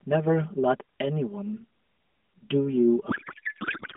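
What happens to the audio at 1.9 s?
At 1.9 s, one channel of the speech runs roughly 5 ms behind the other, and the two are summed to mono. This channel delay (comb filtering) is present throughout the clip, not just at that moment. Because the content common to both channels cancels at evenly spaced frequencies, starting near 100 Hz and recurring across the narrow phone band, the voice sounds hollow and phasey. The light coding of the AMR narrowband mobile link sits under that coloration.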